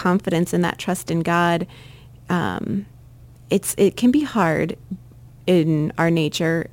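Crude rate conversion runs through the whole clip. Samples were repeated rather than filtered, which fits a 44.1 kHz to 48 kHz step. The repeat pattern adds inharmonic tones. A gritty fizz trails loud and bright speech, sitting roughly 25 dB below it.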